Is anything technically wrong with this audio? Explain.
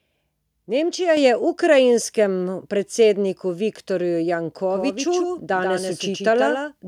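Yes, there are two faults.

At 1.17 s, just before "je ukrajinskemu predsedniku", the microphone volume is stepped up. The call software judged the input too quiet and raised the device's input gain in a single jump of about 5 dB instead of easing it up. Because the change happens at the microphone itself, the speech and the background noise behind it become louder together at that instant.

From 4.7 s to the end, there is a doubled audio track. The likely cause is that the signal is reaching the mix twice, once directly and once through a slower capture path. The second copy trails by roughly 150 ms at a level a few decibels below the original, around 5 dB down. It carries the full frequency range with no decay or room colour, so it sounds like a dry, flat repeat rather than an echo. It begins abruptly and continues until the clip ends.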